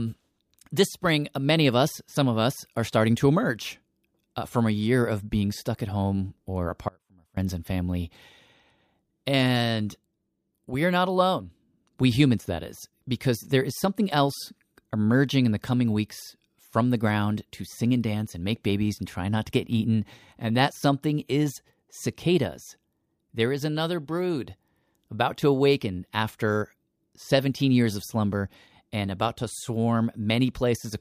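Speech recording with an audio dropout to a faint residue. The signal path likely lost its source briefly while the stages after the break stayed live. Between 6.88 and 7.37 s, after "stuck at home or", the sound drops abruptly to a faint residue around 30 dB down for about half a second, returning at "and family".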